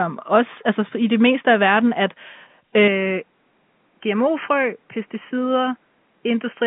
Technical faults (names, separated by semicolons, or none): input switched to a poorer device